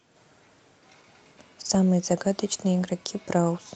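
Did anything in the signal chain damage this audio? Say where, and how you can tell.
Yes. At the network stage, packets were lost between 1.65 and 1.75 s, and the decoder filled about 60 ms, likely three 20 ms packets, from the low-bitrate Opus error-correction copies (lost packet rebuilt from error correction). That stretch has no gap but sounds rougher and noisier.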